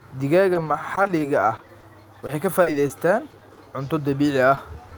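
A speech recording with two kinds of network damage. From 0.53 to 3.59 s there is repeated packet loss with a robotic sound. Over that stretch, audio keeps failing to arrive in time, and the receiver patches each hole by extending the last sound before it. Sixteen gaps follow one another closely, the longest about 40 ms, and roughly a tenth of the span is synthetic fill. The speech turns choppy and mechanical, with fragments missing. Near the end come two cases of short concealed packet loss, at 4.55 to 4.59 s and 4.89 to 4.93 s. Each time about 20 ms of audio was lost and covered by continuing the preceding signal before blending back into the real audio, which leaves a brief smear or wobble rather than a clean cut.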